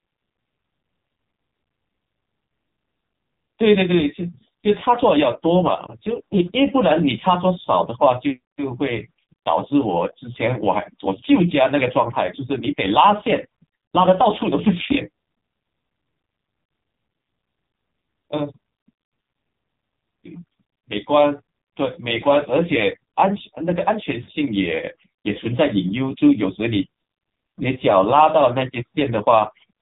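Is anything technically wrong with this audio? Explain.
Yes. Throughout, the speech carries heavy AMR narrowband mobile codec damage. The 8 kHz phone codec rebuilds the voice from a vocal-tract model and sparse pulses, so it sounds buzzy and synthetic, consistent with a low mode near 5.9 kbps. A spectrogram shows a hard ceiling at 3.8 kHz.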